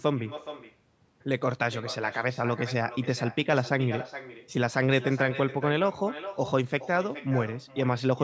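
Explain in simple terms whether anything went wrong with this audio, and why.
Echo with no canceller runs through the whole speech recording. The far end's loudspeaker fed the call back into its microphone and nothing removed it, so every phrase returns about 0.4 seconds later as a quieter, thinner copy trailing behind the talker.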